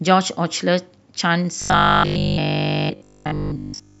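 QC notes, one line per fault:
1.62–4.00 s, robotic sound from repeated short buffers: a rigid metallic 50 Hz buzz, likely one 20 ms block replayed, skipping all real audio.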